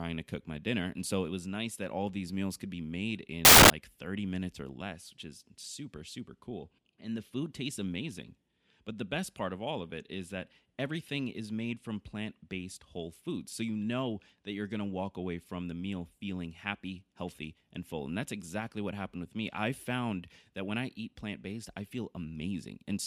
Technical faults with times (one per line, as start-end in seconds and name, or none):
3.45-3.70 samples built from the wrong bytes